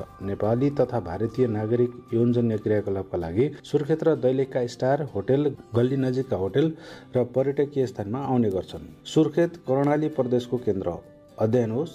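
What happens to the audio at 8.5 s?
At 8.52 s a single-sample bit error spike, a flipped bit, jumps the value to about -23 dBFS and straight back: one broadband tick with no gap or dropout.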